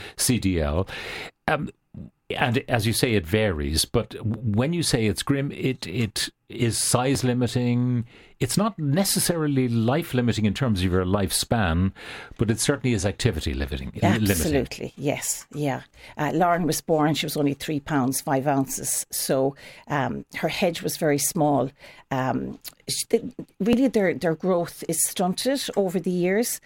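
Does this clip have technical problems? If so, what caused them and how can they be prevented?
Yes. At 7.15 s, just after "grim it it is", and at 23.73 s, just before "their their growth is", the speech skips ahead, losing roughly 10 ms and 20 ms. This is likely a dropped buffer (overrun), where unread input samples were overwritten. Larger buffers or higher capture-thread priority prevent it.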